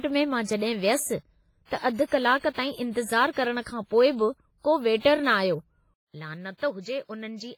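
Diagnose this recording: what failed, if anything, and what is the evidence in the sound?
The codec stage did heavy damage throughout: washy, ringing sound with hiss breathing alongside the speech, likely WMA compression at a low bitrate, around 24 kbps.

At 5.94 s the input likely switched to a poorer device: a 200 ms gap, then everything above 7.6 kHz gone, about 10 dB quieter, with new background noise.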